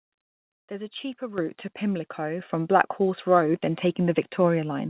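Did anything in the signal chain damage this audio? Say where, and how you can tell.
Yes. Call processing stepped the microphone volume up, about 10 dB at 1.38 s after "is a cheaper" and about 4 dB at 2.4 s, so voice and background jump together.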